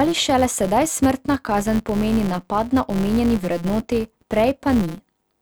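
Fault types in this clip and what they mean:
Filter restarted on every block, throughout: a steady buzz at about 172 Hz runs under the speech for the whole clip, rising and falling with its level. The filter appears to lose its memory at each processing boundary and begin again from rest, so every block opens with a tiny transient. Those clicks repeat at the block rate, which fits a 256-sample block, and fuse into a pitched buzz rather than separate ticks.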